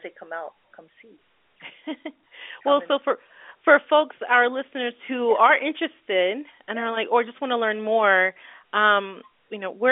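Nothing stood out on listening to this speech over its ordinary telephone-band line.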